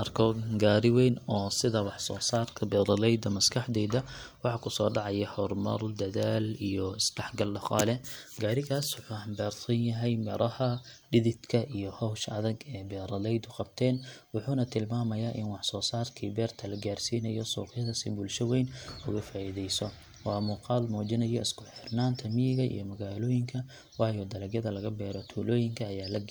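Nothing technically wrong can be heard in the speech recording, so there are no times or causes to give.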